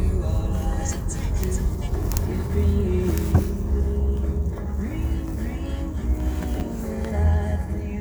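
At about 6.58 to 6.61 s there's a brief jumbled spot where the chunks play out of order. A 10 ms slice of the sound turned up late and landed two chunks after where it belonged, so that 30 ms stretch plays in the wrong sequence. Nothing actually goes missing, but the reshuffle creates three hard joins, so you hear a quick garbled flutter.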